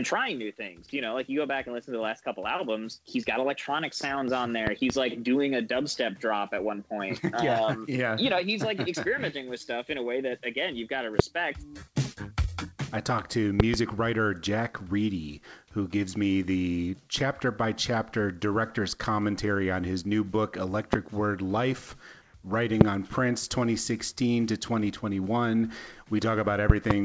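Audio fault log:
4.67–4.92 s, 11.19–11.22 s, 13.60–13.76 s, 20.93–20.96 s, 22.81–22.84 s and 26.70–26.93 s, loud pop: sharp transients peak roughly 25 dB above the sound (about 20 dB at 13.60 s). There is a double pop at 4.67, 13.60 and 26.70 s and a single one elsewhere. Each is likely a voltage step from a plug, switch, static discharge or driver glitch. Downstream circuitry shapes it into a brief thump, and the sound carries on beneath it.
22.22–22.34 s, comfort noise in place of the background: for 120 ms the real background, sitting about 32 dB below the loud passages, gives way to a flat, featureless hiss about 5 dB quieter. This likely comes from discontinuous transmission. The sender's voice detector stopped sending, and the receiver filled the gap with synthetic noise shaped only roughly like the background, which fits RFC 3389 comfort noise. The band limit at 8 kHz, consistent with G.722 on the call path, is unchanged.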